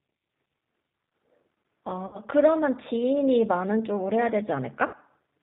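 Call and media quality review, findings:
G.729 codec throughout: band-limited, slightly rough, synthetic speech, nothing above 4 kHz. Pulse-based frame rebuild sounds like an 8 kbit/s CELP codec at work.

VoIP packet loss concealed by the speech codec at 2.07–2.20 s and 4.87–4.95 s: smeared stretch fading out, roughly 60 ms gone each time (about three 20 ms packets), decoder extrapolating, slow recovery afterward.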